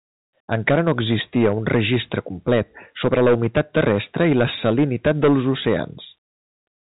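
Hard clipping runs through the whole speech clip: the level reaches the limiting stage about 12 dB too hot, so roughly one sample in twenty-five is flattened at that stage's limit. The squared-off peaks throw up a harsh fuzz on loud syllables, even inside the telephone band that stops near 3.8 kHz.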